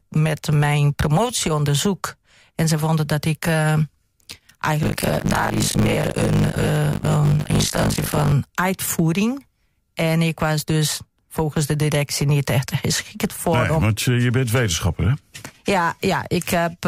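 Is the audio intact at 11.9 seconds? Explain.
Yes, at 11.9 seconds the audio is intact, with no dropout, click, distortion or other fault at that moment.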